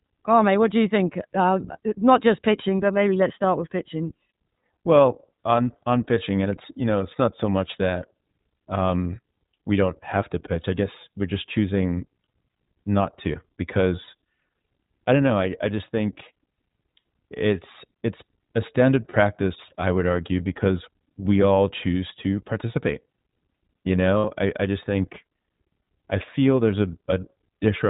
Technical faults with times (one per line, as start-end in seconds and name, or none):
0.00-27.89 iLBC codec
10.62-10.65 lost iLBC frames
14.04-14.09 lost iLBC frames
19.10-19.17 lost iLBC frames
24.18-24.25 lost iLBC frames